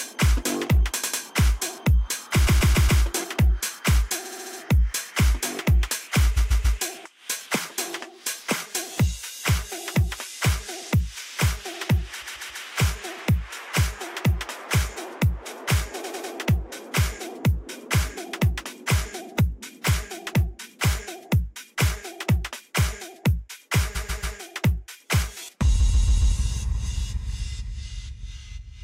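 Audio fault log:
1.02–1.22, 2.46–3.02, 4.24–4.59, 6.36–6.78, 12.21–12.63, 16.03–16.32, 23.94–24.36 and 25.79–26.34 s: repeated frames. Short runs of compressed frames were sent again, so the decoder replays a 70 to 140 ms block two to five extra times. This is heard as a stutter, and each run adds 0.2 to 0.56 s.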